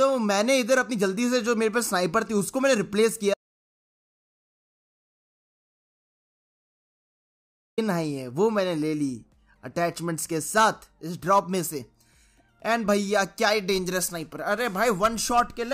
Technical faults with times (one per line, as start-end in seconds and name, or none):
3.34-7.78 audio dropout to silence